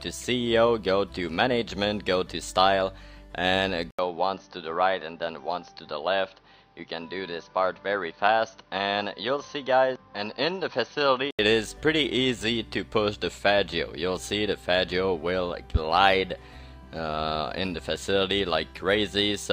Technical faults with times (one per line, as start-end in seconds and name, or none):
3.91-11.39 input switched to a poorer device